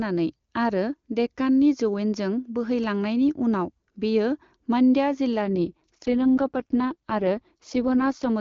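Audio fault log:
5.43 to 8.29 s, AMR rate drop: the HD Voice speech turns rough, buzzy and synthetic for the final stretch. That fits the AMR-WB codec stepping down from 23.85 kbit/s to its 6.6 kbit/s mode, which leaves too few bits for the vocal tract model. On a spectrogram the bandwidth stays the same and there is no gap, but the harmonics smear into grainy noise. The waveform stays continuous, with coarser, less detailed cycles.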